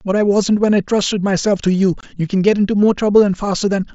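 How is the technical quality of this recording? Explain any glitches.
One glitch stands out in the speech, heard over a wideband headset link whose mSBC coding adds only a light grain to louder sounds.

From 2.01 to 2.03 s there is unconcealed Bluetooth headset packet loss. About 22.5 ms of audio, consistent with three 7.5 ms packets, was lost between headset and phone and was replaced by silence or an idle pattern. This produces a brief hole with hard edges. Concealed loss would instead smear or repeat the sound across the gap.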